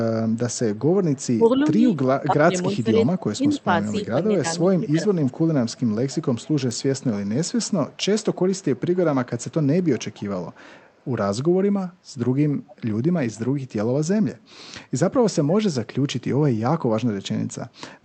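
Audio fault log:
0.32–1.23, 2.73–3.61, 4.57–7.04, 7.65–8.81, 9.38–11.07 and 12.67–12.75 s, echo leak: a faint delayed copy of the speech trails it by 286 ms. It sits roughly 25 to 35 dB below the talker, loudest at 2.73, 4.57 and 12.67 s. The likely cause is a far end on loudspeaker whose echo canceller didn't fully scrub what its mic picked up, so the leftover came straight back down the line.
1.37–5.05 s, speech suppressed in double talk: the talker keeps dipping, up to around 15 dB at the worst point, for about two seconds in total spread across that stretch. It's likely the echo canceller hearing both sides at once, failing to tell the talker apart from the returning echo, and clamping down on everything, so the wanted speech gets pulled down with it.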